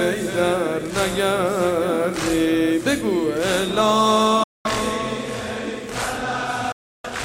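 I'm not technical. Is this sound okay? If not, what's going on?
No. The sound cuts to silence twice, from 4.43 to 4.66 s and from 6.72 to 7.07 s, then carries on as if it never stopped. These are likely Bluetooth dropouts, where the wireless link briefly lost audio.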